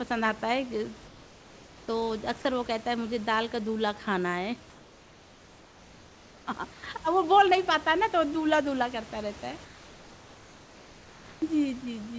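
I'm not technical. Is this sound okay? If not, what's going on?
No. In the pauses from 4.70 to 6.47 s, 6.74 to 6.83 s and 9.65 to 11.42 s, the real room background gives way to comfort noise: a flat, featureless hiss, quieter. The likely cause is the call link going silent between phrases and the receiver filling in synthetic noise.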